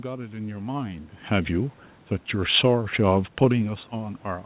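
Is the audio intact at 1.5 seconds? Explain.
No. At 1.5 seconds the voice and the room noise behind it are swelling together, growing steadily louder rather than holding a stable level. This is automatic gain rising, which runs from 1.28 s to the end of the clip. The gain control judged the input too quiet and began raising its amplification gradually. Because it scales the whole signal, background and speech climb in step over several seconds.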